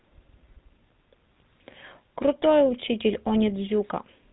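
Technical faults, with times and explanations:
Throughout, GSM full-rate codec: the speech has a plainly audible buzzy, gravelly roughness and nothing above 3.9 kHz, which fits a 13 kbps GSM full-rate path. The codec rebuilds speech through a vocal-tract model driven by sparse, evenly spaced pulses, and that coarse excitation produces the grain.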